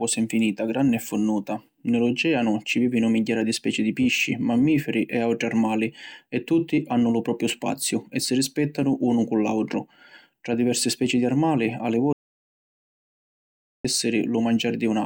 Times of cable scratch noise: none

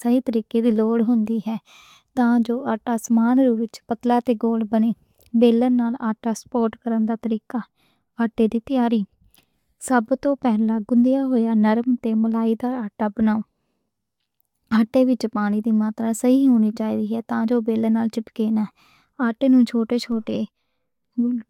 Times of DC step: 20.12

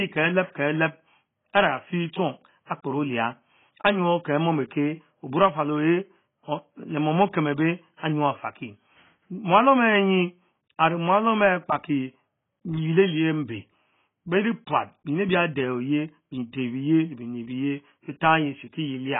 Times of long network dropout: none

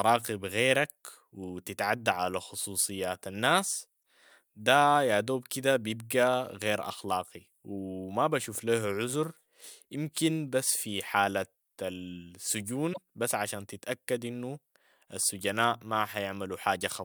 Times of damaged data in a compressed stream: 4.00-4.02, 12.90-12.98

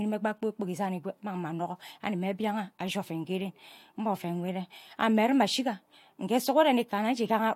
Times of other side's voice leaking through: none

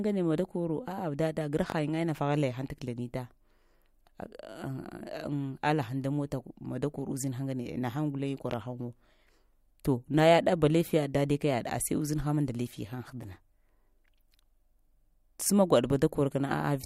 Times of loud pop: 1.70-1.74, 8.51-8.55

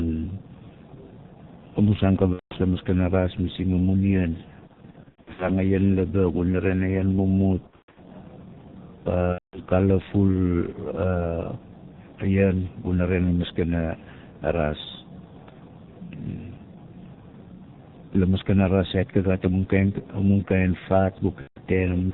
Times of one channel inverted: none

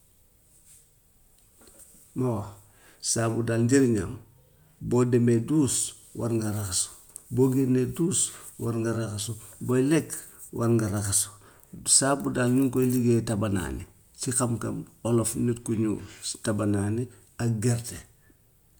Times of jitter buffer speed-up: none

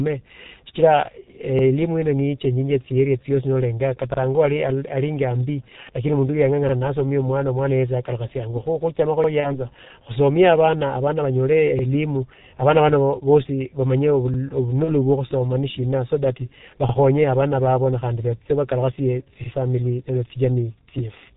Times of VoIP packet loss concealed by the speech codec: 9.40-9.64, 14.84-14.95

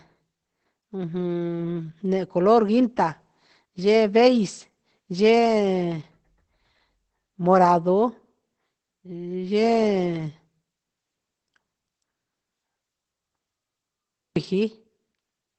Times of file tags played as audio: none

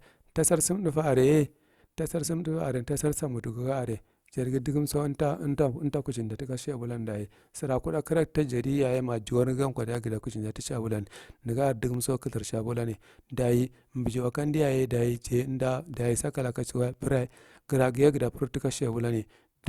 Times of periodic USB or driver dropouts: 0.93-18.93

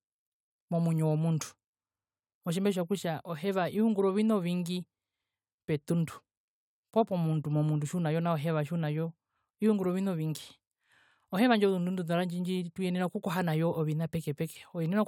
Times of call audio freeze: none

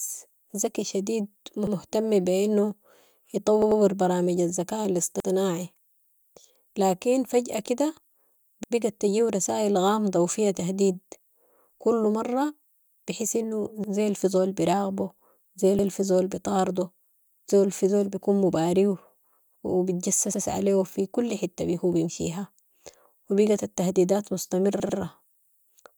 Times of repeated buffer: 1.67-1.76, 3.62-3.81, 5.20-5.29, 8.64-8.73, 13.84-13.93, 15.79-15.88, 20.34-20.43, 24.80-24.98

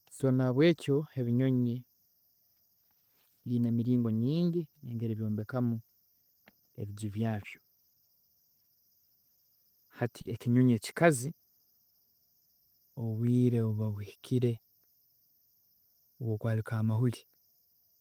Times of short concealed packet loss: 0.75-0.79, 10.21-10.27

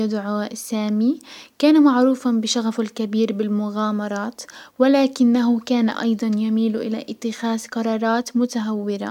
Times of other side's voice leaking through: none

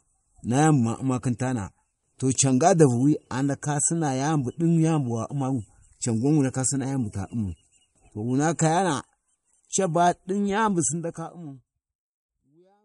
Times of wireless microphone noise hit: none

